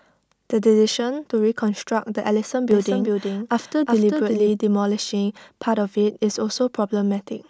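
From 2.71 to 4.49 s the speech is heard twice, a full-band copy about 5 dB quieter trailing about 0.4 s behind and cutting in and out abruptly: a doubled audio track, likely from a second, slower capture path.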